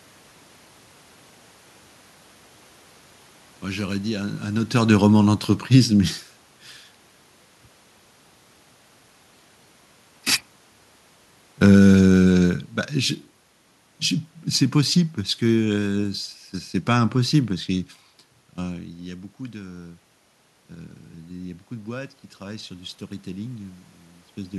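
Automatic gain falling occurs from 4.79 to 6.29 s and again from 11.64 to 13.24 s. Each time the gain control judged the input too loud or its background noise too strong and eased its gain down, by about 3 dB in the first stretch and about 4 dB in the second. The speech starts loud and then sinks gradually, and the room noise drops along with it. That shared fall distinguishes it from the talker moving around 4.5 s, where only the speech level changes.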